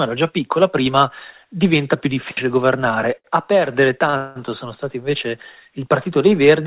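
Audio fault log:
3.18 s and 4.10 s, short stall from a late packet: a packet arrived late and the jitter buffer ran dry, so the last sound was held for about 62 ms and 28 ms, with nothing lost.
4.17 to 4.38 s, call audio freeze: likely held-up packets emptied the jitter buffer, so about 185 ms of the last sound is continued as a fading buzz or hiss before the audio resumes where it stopped.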